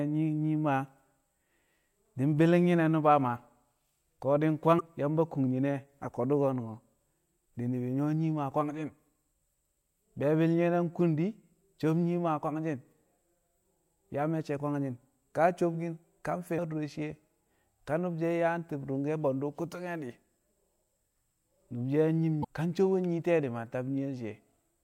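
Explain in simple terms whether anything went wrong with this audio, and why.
Three brief glitches break into the speech at 4.77 to 4.81 s, 16.55 to 16.59 s (right after "kwangshi̱n ka sobkin ka"), and 22.41 to 22.45 s (just before "ka sobon"). This is damaged data in a compressed stream. Corrupted bytes made the decoder misread those frames and lose its place.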